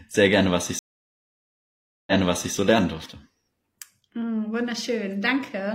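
At 0.79 s the connection drops and the player reconnects, starting a fresh decoder mid-stream. This stream reconnect leaves about 1.28 s of silence, and at 2.54 s the speech resumes roughly 0.47 s earlier than where it broke off, repeating a short stretch.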